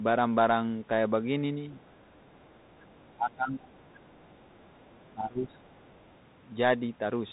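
The whole clip carries the Bluetooth CVSD headset codec: nothing above 3.8 kHz survives, and the one-bit delta coding, which fits a 64 kbps headset link, leaves a granular hiss under the speech, scratchy sibilants and distortion where loud high content outruns the adaptive step.

A faint trace of the other side's voice leaking through appears at 1.84 s, then longer from 2.15 to 3.16 s, very low under the talker. The likely cause is loudspeaker playback that the echo canceller did not fully remove from the microphone.

From 3.16 to 3.76 s the speech is suppressed in double talk, dipping by roughly 20 dB for about half a second, likely because the canceller could not separate the talker from the echo and turned both down.

The leak returns from 3.75 to 5.09 s, slightly stronger but still faint. A second double-talk suppression follows from 5.14 to 5.74 s, a dip of roughly 15 dB. A brief final scrap of leakage sits at 5.78 to 6.01 s.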